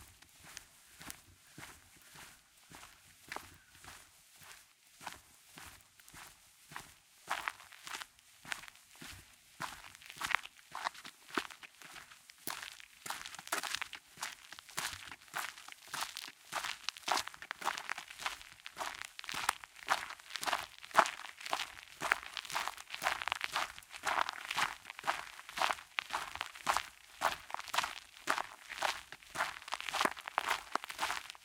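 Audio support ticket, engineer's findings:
No faults found in the audio; nothing to report for this ticket.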